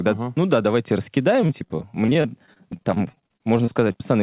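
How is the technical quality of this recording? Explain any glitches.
The recording has one clear fault, and it degrades most of the speech. It sits on a narrowband call line, consistent with a telephone-grade codec, with nothing above 4 kHz.

From 1.42 s to 4.01 s, just after "ну да давайте", repeated packet loss (robotic sound) sets in. Dozens of short gaps, none longer than about 34 ms, are patched by extending the preceding sound, concealing roughly a fifth of the stretch. That yields a choppy sound with pieces missing. A single dropout would be one isolated hole, not this sustained chatter.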